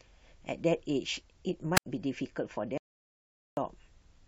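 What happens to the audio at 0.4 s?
Nothing goes wrong at 0.4 s; the speech carries on intact through that moment, with no dropout, click or distortion.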